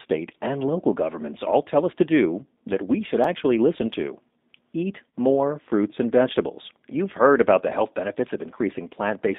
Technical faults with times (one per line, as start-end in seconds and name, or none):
0.00-9.39 G.729 codec
3.24 repeated buffer
5.11 VoIP packet loss concealed by the speech codec